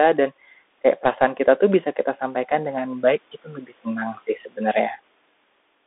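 Thin, boxy speech with scratchy s sounds and a granular hiss runs throughout, band-limited to 250 Hz–3.6 kHz with nothing above 3.8 kHz: the Bluetooth CVSD headset codec, consistent with a 64 kbps link.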